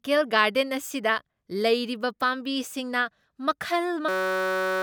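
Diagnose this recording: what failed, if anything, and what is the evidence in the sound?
A system hang loop at the driver and buffer stage: from 4.09 s to the end at 4.83 s, the speech is replaced by a steady buzz near 188 Hz. A 5.33 ms fragment, which fits a 256-sample buffer, loops endlessly while the host stalls, losing about 0.7 s of audio.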